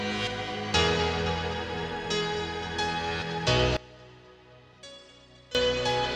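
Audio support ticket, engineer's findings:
Level collapse 3.77–5.55 s, about 21 dB down; centre content and low end largely gone, faint residue left. Likely one channel inverted: reversed polarity on one stereo leg, so shared material cancels on mono summing. Check channel wiring, plugin phase switch, or downmix stage.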